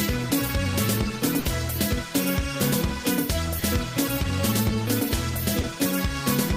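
The audio has packet-loss damage of two kinds. A burst of packet loss runs from 1.39 to 1.47 s. About 60 ms of the stream never arrived, and the receiver filled that span by extending the last sound and fading it out. It comes out as a held buzz or dying hiss before the audio resumes with 60 ms skipped. A spectrogram shows frozen, flat harmonics or smooth noise darkening toward the right, ending in an abrupt vertical seam. The waveform shows repeating periods shrinking in amplitude. There are also two instances of short concealed packet loss, at 3.59–3.63 s and 5.61–5.65 s. Each time, roughly 20 ms failed to reach the decoder, and the gap was patched with continued pitch or shaped noise, then blended back. Each is heard as a brief smear or wobble. On a spectrogram they appear as narrow patches of smoothed, detail-free energy. In the waveform they show as short stretches of overly regular or softened cycles.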